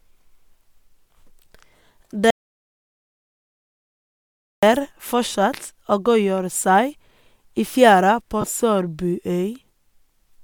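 At 2.31 s the speech cuts off mid-flow into complete digital silence, with no room tone at all, until it resumes at 4.63 s. That is an audio dropout to silence lasting about 2.3 s. The input was likely lost through a disconnected device, a failed link or a mute while zeros kept being written, so whatever was said in that gap is gone.

From 5.32 to 5.35 s and again from 8.41 to 8.44 s, the speech briefly smears into a short noisy blur. These are lost LE Audio frames. Each gap lasts about 22.5 ms, which fits three missing 7.5 ms frames. The LC3 decoder filled each gap by repeating the last spectrum with random signs.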